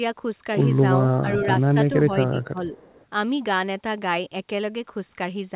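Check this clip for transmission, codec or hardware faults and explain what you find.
There are two problems here, both from the echo canceller on a speakerphone-style call, heard through narrowband audio with nothing above 4 kHz, which points to a telephone-grade codec.

Speech suppressed in double talk, 1.22 to 2.75 s: the level dips by up to about 10 dB for roughly a second in total, likely because the canceller ducked both overlapping talkers.

Echo leak, 1.41 to 1.46 s and 2.77 to 3.06 s: a 437 ms delayed copy slips through, about 15 dB and then about 30 dB below the speech, likely from residual loudspeaker pickup.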